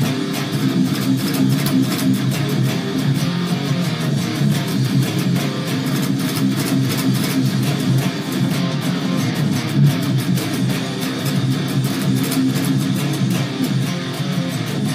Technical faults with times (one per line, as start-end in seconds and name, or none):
none